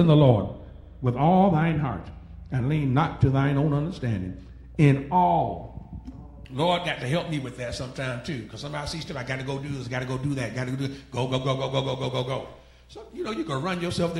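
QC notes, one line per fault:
0.00–6.45 s, de-emphasis applied wrongly: the sound is dull and muffled, with the top end rolled away so it seems heard through cloth. The high frequencies fall off in a smooth, gradual slope rather than a sharp cut, ending about 11 dB lower at 10 kHz than at 1 kHz. That shape points to a treble-cut de-emphasis stage run on audio that carried no matching pre-emphasis, or run a second time, so the highs are taken away with nothing to restore them.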